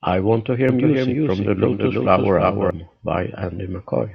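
Speech runs with a doubled audio track from 0.69 to 2.71 s, right after "I want to hear". A second full-band copy trails the original by roughly a third of a second at about 5 dB lower, and it switches in and out abruptly. Unlike a room echo or reverb, it has no decaying tail and no room colouring. It is likely caused by the audio being captured again through a slower path and mixed back in.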